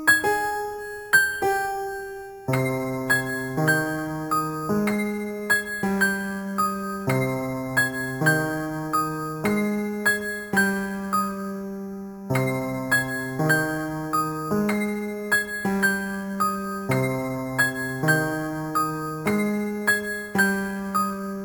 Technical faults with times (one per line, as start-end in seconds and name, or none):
0.00-21.45 imaging from sample-and-hold upsampling